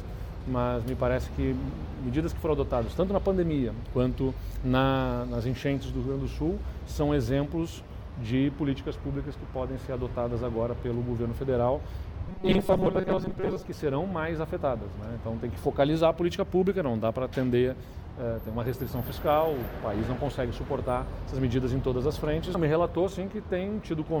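From 12.28 to 13.66 s the sound collapses into a rigid, metallic buzz at a fixed 188 Hz. This is robotic sound from repeated short buffers, likely caused by new audio arriving too slowly, so a slice of roughly 5.3 ms is looped in its place, with about half the material replayed rather than fresh. A plain dropout would leave silence or a stutter. Here the steady pitch set by the loop length gives it away.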